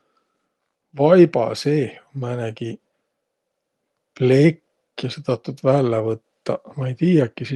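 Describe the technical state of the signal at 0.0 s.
At 0.0 s the signal is intact, with no audible fault at that point.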